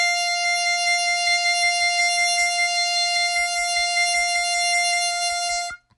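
MP3 compression runs throughout this music clip. Nothing sounds above 11.4 kHz and the damage is plainly audible, which fits a low bitrate near 46 kbps, likely from encoding.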